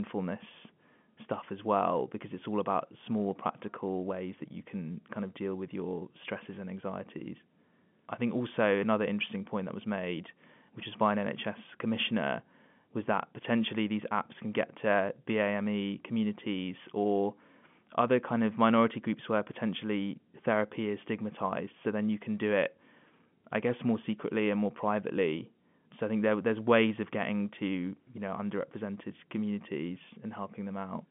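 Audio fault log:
No faults are present: the speech arrives through G.711 mu-law telephone coding at 64 kbps, confined to the line band of roughly 150 Hz to 3.4 kHz, with nothing above 3.7 kHz.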